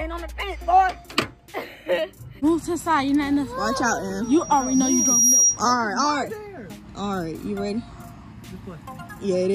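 From 4.23 to 5.62 s a 5.7 kHz tone swells over about a second to a piercing squeal roughly 10 dB above the sound: loudspeaker feedback squeal, a microphone-speaker loop with gain above one.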